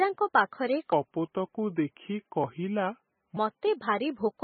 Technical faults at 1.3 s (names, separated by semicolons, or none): MP3 compression; section at the wrong speed